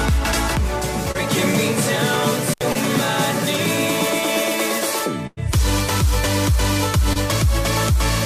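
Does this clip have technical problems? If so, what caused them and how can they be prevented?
Yes. Short concealed packet loss occurs at 1.11 to 1.16 s, 2.72 to 2.77 s and 7.13 to 7.17 s. Each time, about 20 ms of audio arrived too late for the decoder. The receiver covered the hole by carrying the preceding sound forward for 22 to 31 ms and then blending back in, which is heard as a brief smear or wobble. A larger jitter buffer or a more stable network connection would prevent it.

An intermittent contact occurs from 2.51 to 2.61 s. A plug or cable opened for about 72 ms, and the sound drops out with crackle at both edges and faint hiss in between, the signal path briefly broken rather than degraded. Reseating or replacing the cable and connector would prevent it.

A burst of packet loss runs from 5.27 to 5.39 s. About 100 ms of consecutive audio never arrived in time. The receiver extended the last sound for about 100 ms while fading it, so it turns into a held, decaying tone or hiss, with roughly 10 ms of silence before playback resumes further along with that stretch missing. 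Prioritising the audio traffic or moving to a less congested link would prevent it.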